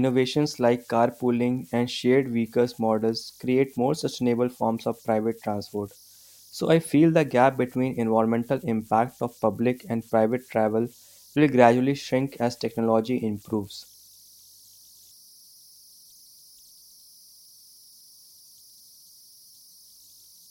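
An undithered delta-sigma converter settling into repeating bit patterns runs through this speech clip, producing converter idle tones: a whistle near 5 kHz, about 31 dB below the signal, audible in pauses and as grainy noise under quieter passages.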